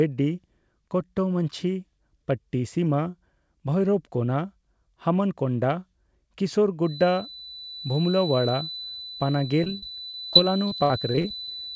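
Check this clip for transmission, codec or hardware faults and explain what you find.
Two faults are present in this speech clip: a steady tonal whistle over the second half, and a burst of repeated packet loss near the end.

From 6.80 s to the end of the clip, a thin feedback whistle sits at 4 kHz, roughly 15 dB below the speech, holding pitch while swelling and fading slowly in level. The likely cause is the loudspeaker-to-microphone loop running just at the edge of instability. One frequency gets enough loop gain to keep ringing, but not enough to build into a runaway howl.

From 9.64 s to 11.49 s, repeated packet loss (robotic sound) breaks the speech up with about a dozen dropouts. Each gap is bridged by extending the preceding audio, adding about 335 ms of synthetic fill in total, or about 18% of that span. The longest single hole is 62 ms. Because the dropouts arrive in quick succession, the stretched fragments stack into a choppy texture with pieces of speech missing. 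The call path's band limit, with nothing above 8 kHz, is consistent with a wideband codec such as G.722.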